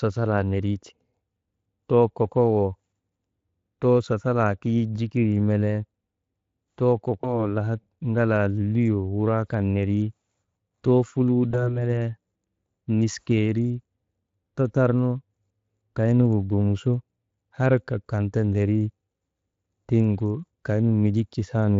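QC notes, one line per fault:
7.22–7.35 s and 11.51–11.81 s, VoIP packet loss concealed by the speech codec: a single lost 20 ms frame each time is filled in by the decoder, which extends the last pitch and spectral shape at falling gain. Because each decoded frame depends on the previous one, the voice stays weak or distorted after packets resume, within events of about 0.13 s the first time and 0.3 s the second, over the light coding damage of the Speex codec.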